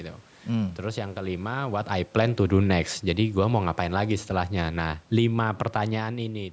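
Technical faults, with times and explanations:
2.39 to 6.04 s, automatic gain falling: the speech starts loud, then the level sinks steadily by about 4 dB over nearly four seconds. The automatic gain control judged the input too loud or its background noise too strong, and pulled its gain down gradually rather than in one step. The room noise drops by the same amount, which separates this from the talker shifting position around 5.5 s, since a talker moving changes only the speech level.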